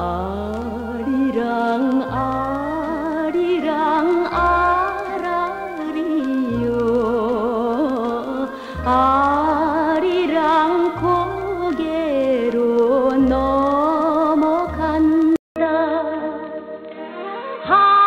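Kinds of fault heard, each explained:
Input switched to a poorer device: at 15.36 s a 200 ms gap breaks the sound, which then turns dull and boxy, with nothing above 4.2 kHz, a faint new noise floor and a steady level to the end, likely from recording shifting to a narrower-band microphone or headset.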